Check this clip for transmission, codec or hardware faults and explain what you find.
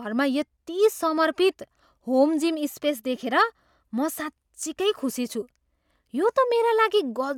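No faults detected.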